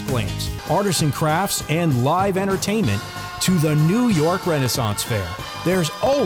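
From 4.40 s to 6.19 s, a steady train of tiny ticks sounds every 0.064 s, around thirty in all. These are periodic USB or driver dropouts: something stalls the audio path at a fixed interval, and each time roughly half a millisecond of sound drops to silence.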